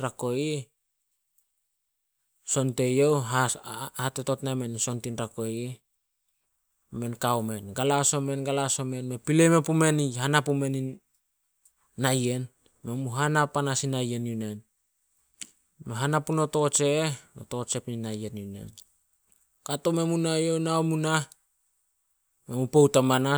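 A speech recording with nothing technically wrong to point to, so there are no times or causes to give.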